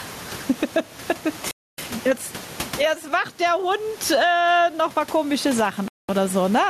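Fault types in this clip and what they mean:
Gain pumping: The level breathes with the speech. The room noise sits about 32 dB below the speech, and the gain swings by around 20 dB. This likely comes from gain set far too high, with a fast limiter pulling it down.
Bluetooth stall: The speech cuts to silence twice, for 0.27 s at 1.51 s and for 0.21 s at 5.88 s, then carries on. The likely cause is interference delaying packets, so the headphones' buffer ran dry and playback waited for resent data.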